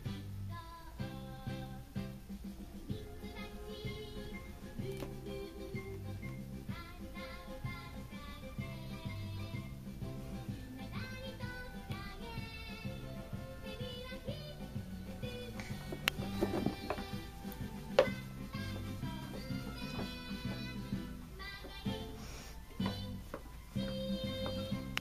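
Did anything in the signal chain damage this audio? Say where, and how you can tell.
No, no signal-chain damage heard.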